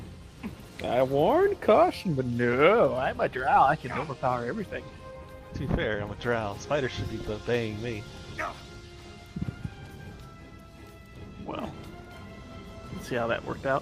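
Nothing here trips any alarm, since there's not a single technical fault to point to anywhere in the recording.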